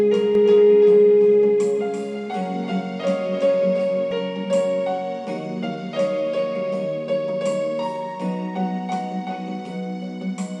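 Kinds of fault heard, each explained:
Doubled audio track: from 0.35 s to 4.11 s a second copy of the same sound runs underneath the original, trailing by roughly a third of a second and a few decibels quieter, about 5 dB down. The copy is full-band and dry, with no decay or room colour, and it cuts in and out abruptly at those points. This is likely a second capture through a slower path, mixed back in out of step.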